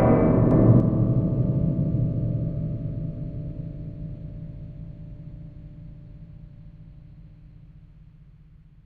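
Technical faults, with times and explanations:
0.51–0.80 s, sudden gain jump: the level steps up by about 4 dB in a single sample, with the background noise lifting right along with the sound, then drops back at 0.80 s. That's likely a gain setting applied with no ramp, so the edges land as abrupt steps.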